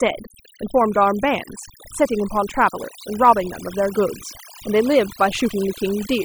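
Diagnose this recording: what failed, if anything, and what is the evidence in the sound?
Overdone noise removal in call processing, throughout: background drops and breaks up into twinkling specks. Unlike codec artefacts, the residual noise itself gets gated band by band.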